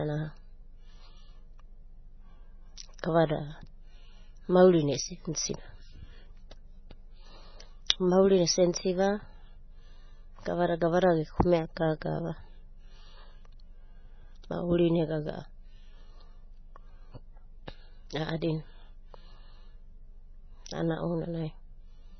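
From start to finish the audio is likely starved of bits by heavy MP3 compression, at a rate that fits something near 16 kbps. With so little to spend, the encoder has cut the treble at a fixed point, leaving nothing above 6 kHz, and has zeroed the weaker frequency lines, which flicker in and out between frames. The speech therefore sounds dull and watery, with a swirling, metallic chirp on s sounds and smeared attacks.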